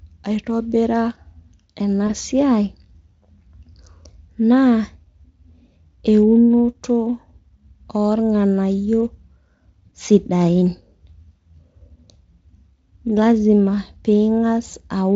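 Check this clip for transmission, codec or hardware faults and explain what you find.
Three brief concealment glitches are audible, all of one kind, over Speex coding that itself sounds clean. VoIP packet loss concealed by the speech codec, at 2.07–2.10 s, 9.89–9.92 s and 14.69–14.75 s: each time about 20 ms went missing, so the decoder extended its last pitch and filter with falling gain, leaving a short buzzy or noisy, fading smear.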